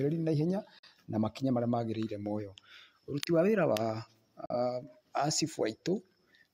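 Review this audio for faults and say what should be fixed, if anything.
Digital broadcast dropouts at 0.79–0.87 s and 4.46–4.55 s: the speech mutes with a 3 ms fade, consistent with one corrupted 42.7 ms frame. Prevent this with stronger reception or error protection.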